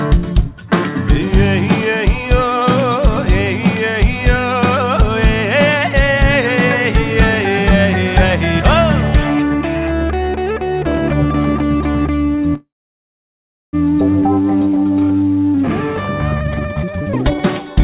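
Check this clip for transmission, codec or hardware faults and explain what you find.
Two transmission faults are present in audio that stops at 4 kHz, as a G.711 mu-law call path would leave it.

From 12.54 to 13.75 s there is a call audio freeze: a brief fading buzz or hiss, then about 1.05 s of silence. The likely cause is delayed packets draining the jitter buffer. Nothing is lost, unlike a dropout; the sound simply resumes later.

From 16.35 to 17.75 s a jitter buffer speed-up runs the sound at 179% speed, removing roughly a second through repeated pitch-period cuts. The pitch stays put, unlike a sample-rate error.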